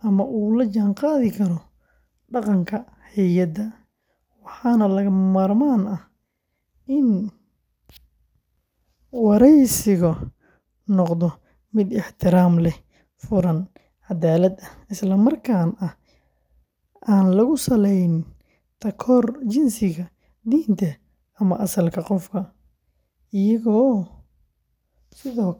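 No technical faults can be heard anywhere in the speech recording.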